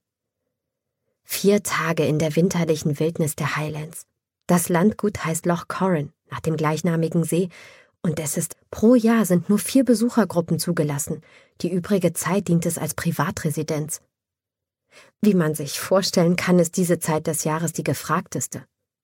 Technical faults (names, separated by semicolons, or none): stream segment skipped